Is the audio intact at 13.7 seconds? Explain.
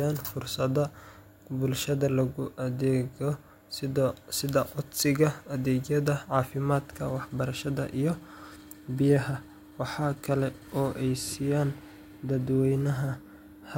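Yes, the audio is intact at 13.7 seconds, with no dropout, click, distortion or other fault at that moment.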